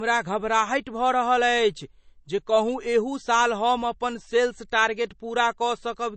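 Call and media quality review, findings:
Low-bitrate audio saved at a high bitrate, throughout: dull speech, spectrogram empty above 8.3 kHz. Likely an earlier low-bitrate MP3 pass; the high-rate re-encode cannot restore it.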